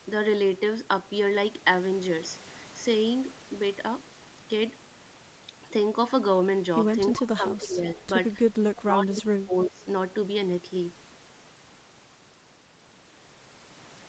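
From 7.15 to 8.02 s the speech sinks by as much as about 15 dB and thins out in patches, most likely speech suppressed in double talk. The echo canceller on the sending side, likely hearing the far end at the same time, could not tell the local talker from the loudspeaker echo and turned everything down. On the waveform the envelope pinches in for roughly 0.7 s; on a spectrogram the upper bands fade, leaving gappy, weakened harmonics.

Between 7.95 and 8.04 s a faint scrap of the speech returns 335 ms late, around 25 dB under the direct sound. This is an echo leak, likely from a loudspeaker whose echo canceller let part of the microphone pickup through. On a spectrogram it appears as a dim, smeared copy of earlier harmonic traces, short. In the waveform it is a small, low-level burst sitting against the tail of the first dip.

From 8.76 to 9.87 s the speech suppressed in double talk returns more severely, dropping by as much as about 20 dB, again over roughly 0.7 s in total. 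The likely cause is the same: overlapping talk left the canceller unable to separate the near talker from the echo, so it attenuated both. The waveform shows chopped, collapsed stretches of the envelope, and the spectrogram shows broken, dimmed harmonics with the top end of the 8 kHz call band cut away.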